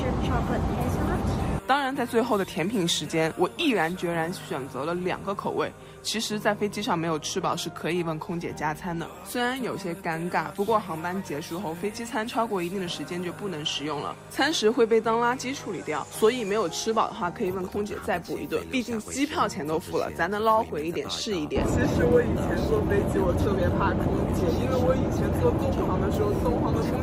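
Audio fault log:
No faults were heard anywhere in this clip. There is nothing to log.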